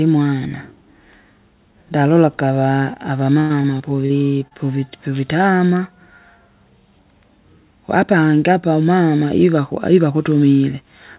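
Speech over a call link, with the band stopping at 4 kHz in a way that fits G.711 narrowband coding. From 3.40 to 4.12 s there's repeated packet loss (robotic sound): a run of dropouts, the longest about 96 ms, each patched by stretching the last bit of sound, so roughly a quarter of that stretch is filled-in audio and it turns choppy. Right after, at 4.48 to 4.53 s, there's a short concealed packet loss: about 20 ms went missing and the receiver papered over it by extending what came before, leaving a quick smear or wobble.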